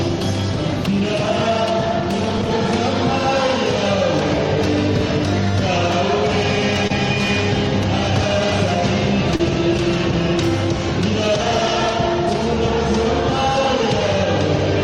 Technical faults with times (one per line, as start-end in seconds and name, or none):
6.87-6.92 short concealed packet loss
9.36-9.41 short concealed packet loss